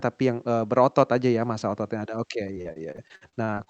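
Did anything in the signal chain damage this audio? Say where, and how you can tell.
Yes. From 2.47 to 3.68 s the sound turns choppy and robotic, riddled with short holes up to 54 ms long. This is repeated packet loss on the network. The receiver keeps extending the last sound to patch missing packets, which covers about a third of that stretch.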